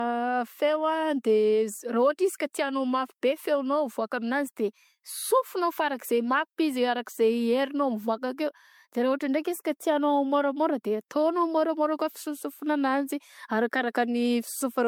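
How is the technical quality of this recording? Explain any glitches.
The quality's degraded, with one fault running through the whole clip: generation loss. The speech sounds swirly, hollow and smeared, with softened attacks and nothing above 19.9 kHz. It's likely from around five successive lossy passes, consistent with MP3 at roughly 96 kbit/s, each re-quantising on a shifted frame grid so the noise and spectral holes pile up.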